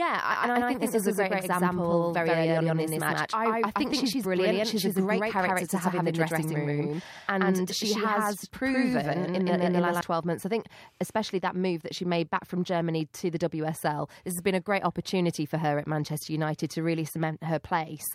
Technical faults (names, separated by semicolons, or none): doubled audio track